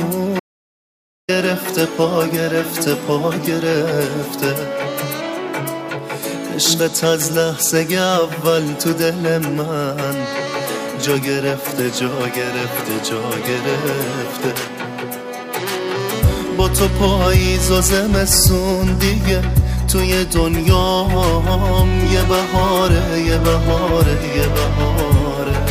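From 0.40 s to 1.29 s there is an audio dropout to silence lasting about 0.89 s: the sound cuts off abruptly and resumes mid-flow, with the input likely lost while zeros were written. Unlike a natural pause or gated fade, the gap holds no room tone whatsoever.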